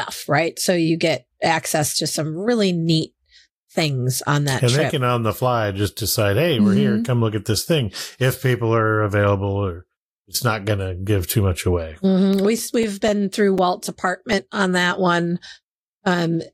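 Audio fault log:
12.33–14.33 s: CD scratch ticks, nine regular ticks up to around 5 ms; each disc revolution, a blemish overwhelmed error correction, so samples were interpolated or muted.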